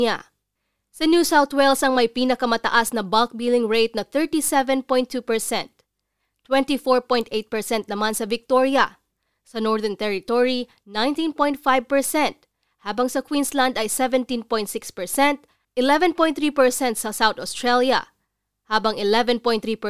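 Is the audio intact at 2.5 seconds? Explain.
Yes, at 2.5 seconds the speech plays through intact, with no dropout, click, distortion or other fault to be heard at that moment.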